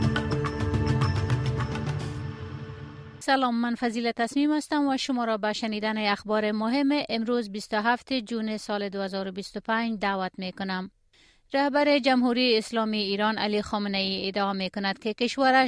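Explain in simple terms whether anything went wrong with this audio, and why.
Nothing went wrong with this audio; there are no faults to point to anywhere in it.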